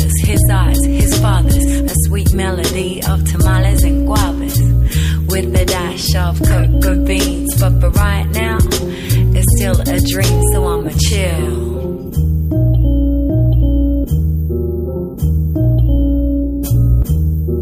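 No technical faults can be heard anywhere in the audio, with the signal holding steady and intact throughout.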